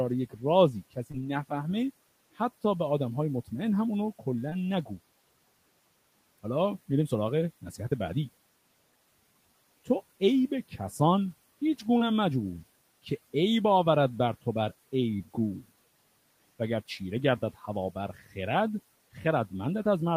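Speech cut by the noise suppressor comes first, at 0.3 to 0.43 s, where quiet parts of the speech are pulled down by about 15 dB, and again across 0.73 to 1.67 s, dipping by about 17 dB in short bites that add up to roughly a fifth of a second. The suppressor mistook soft consonants and word tails for background and lowered them along with the room noise, which sits about 25 dB under the speech. The affected sounds come out swallowed and faint. Unlike a dropout, the sound fades rather than stops.

Inside that stretch, at 1.11 to 1.15 s, is a short concealed packet loss. About 20 ms of audio arrived too late to decode, and the receiver bridged the gap by extending the preceding sound before blending back into the real signal. The same brief smear recurs at 4.49 to 4.53 s, 11.97 to 12.02 s and 15.18 to 15.21 s. Each is a momentary smear or wobble, not a quieter stretch, which separates it from the suppressor's dips.

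The suppressor cuts once more at 18.15 to 18.36 s, by about 12 dB, affecting roughly a tenth of a second.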